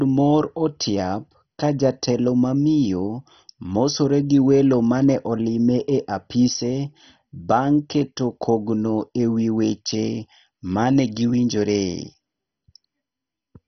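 Throughout, the speech sounds dull and gurgling, with nothing above 6.1 kHz. This is likely heavy MP2 compression, at a rate consistent with 32 kbps, switching off upper sub-bands.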